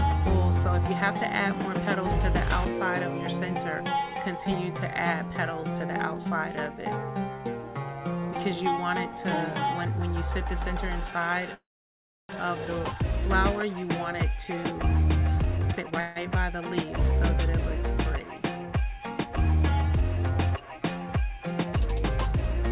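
A call audio freeze runs from 11.54 to 12.31 s, likely from delayed packets emptying the jitter buffer. Sound briefly continues, then about 0.65 s is silent, and playback resumes where it stopped.

From 15.43 to 16.00 s, a jitter buffer speed-up trims repeated short pieces, roughly 0.4 s in all. Audio runs at 173% speed, hurried but at the same pitch.

A second freeze spans 16.00 to 16.18 s. The last sound carries on as a brief fading buzz or hiss, with no silence, and nothing is lost. Throughout, nothing is heard above 4 kHz, which fits a narrowband 64 kbps call codec.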